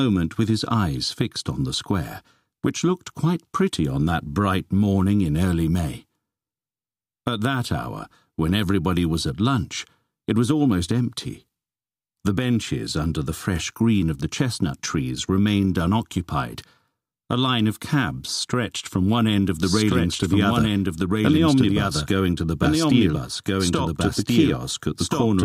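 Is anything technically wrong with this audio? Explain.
Yes. A doubled audio track starts at 19.62 s and runs to the end: a second full-band copy of the sound appears abruptly, trailing about a second and a half behind and roughly as loud, with no decay or room colour. It is likely a second capture through a slower path, or an edit holding two misaligned copies.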